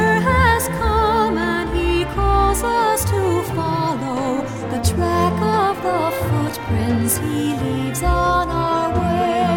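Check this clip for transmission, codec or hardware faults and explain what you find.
No transmission, codec or hardware faults can be heard anywhere in the recording, and the signal stays continuous and stable throughout.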